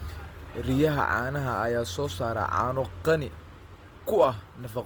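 Opus compression runs through the whole speech clip: the voice sounds grainy and rough, with noisy texture replacing clean harmonics, which likely comes from a low-rate Opus encode in music mode. A spectrogram shows filled, smeared bands without holes, extending to about 20.2 kHz.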